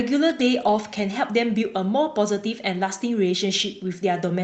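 No technical faults can be heard anywhere in the speech. There is no event in the recording to place on a timeline.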